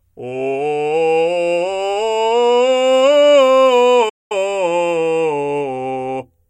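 At 4.09 s the music cuts out for about 0.21 s before resuming, a playback stall, likely from the player starving of data.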